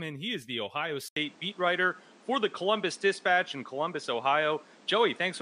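At 1.08 s the recording likely switches its input to a poorer device, which holds until the end. An 80 ms silence marks the changeover, and the speech then returns through a narrower path: nothing above 10 kHz survives, so the top end turns dull and boxy. The level shifts by about 5 dB, and a new background noise floor appears, sitting roughly 30 dB below the speech.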